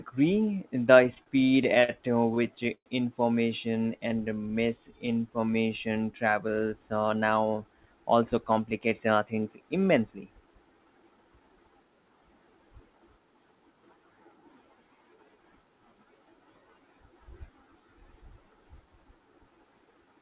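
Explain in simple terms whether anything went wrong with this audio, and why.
Several brief hiccups happened, all from the call's buffering rather than lost sound. The audio comes through a phone-style connection that cuts everything above 4 kHz.

Repeated stalls (stutter), from 1.04 to 1.90 s and again from 2.34 to 2.88 s: the audio catches and drags in short jerks while the receiver briefly stretches the last sound. The pauses last up to about a tenth of a second, and nothing is actually cut out.

Jitter buffer slow-down, from 3.80 to 6.13 s: the speech plays at about 91% speed, adding roughly 0.23 s. The pitch stays the same, unlike a slowed recording, which would sound deeper.

Jitter buffer speed-up, from 7.85 to 11.41 s: the speech runs about 8% fast, with roughly 0.3 s trimmed out, so it sounds hurried. The pitch is unchanged, which tells it apart from a recording simply sped up.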